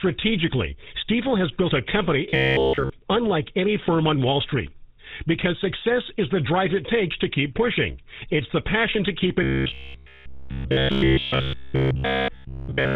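Throughout, the speech has the buzzy, gravelly roughness of the GSM full-rate codec, consistent with 13 kbps. Nothing passes above 4 kHz, so it sounds dull. From 2.30 to 2.90 s, robotic sound from repeated short buffers turns most of the audio into a rigid metallic buzz at 66.7 Hz. The cause is likely a roughly 15 ms buffer replayed in place of late audio. The same buzz returns from 9.43 to 12.96 s and replaces all of the sound there.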